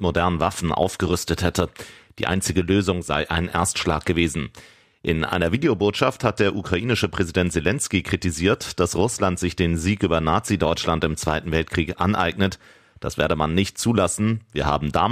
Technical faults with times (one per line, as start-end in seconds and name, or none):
none